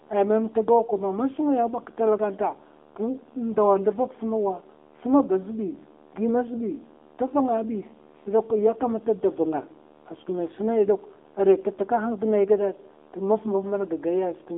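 From start to finish the speech sounds thin, boxed-in and buzzy, with a synthetic edge and nothing above about 3.8 kHz. This is the AMR narrowband mobile codec: a line band of roughly 250 Hz to 3.7 kHz, rebuilt from a vocal-tract model at a bitrate that fits 7.4 kbps.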